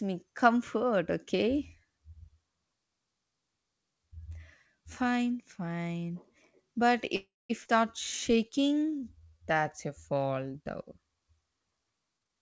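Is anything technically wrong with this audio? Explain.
Yes, the speech in this clip has four timing faults from its call path, which, consistent with a 64 kbps G.722 call, carries nothing above 8 kHz.

From 7.16 to 7.51 s there is a call audio freeze, likely caused by packets held up in transit until the jitter buffer ran dry. The last sound is stretched into a fading buzz, then about 210 ms of silence, and playback resumes where it stopped. A spectrogram shows smeared horizontal bands fading into a blank column.

At 7.64 s the audio skips ahead. Roughly 200 ms of speech is dropped to recover the delay, and the two sides are spliced almost directly. The waveform shows an abrupt discontinuity, and the spectrogram a hard vertical seam where the formants jump.

From 8.32 to 9.60 s a jitter buffer slow-down repeats single pitch periods to add 200 ms, so speech runs at 85% speed at unchanged pitch and sounds drawn out. 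On a spectrogram the harmonics keep their spacing but vowels stretch wider.

From 12.18 to 12.37 s a jitter buffer speed-up removes roughly 200 ms in short pitch-period cuts, doubling the pace to about 203% at the same pitch. It sounds hurried, and the spectrogram shows syllables compressed tightly together.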